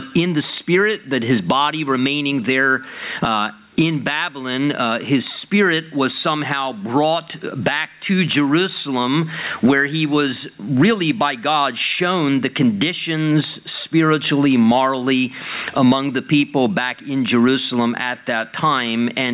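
Throughout the clip, the level pumps with a swing of around 20 dB that leaves the sound squashed and pumping. This gain pumping is likely from input gain set far too high, with a fast limiter clamping down on each peak. Nothing is heard above 4 kHz, which fits a narrowband call codec such as G.711.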